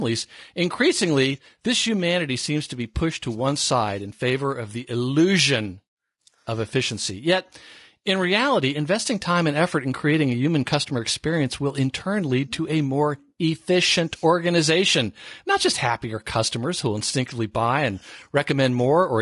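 Throughout the speech, low-delay AAC compression plainly roughens the voice into grainy texture, with noise filling between harmonics rather than swirling. This sound is likely AAC-ELD at around 32 kbps.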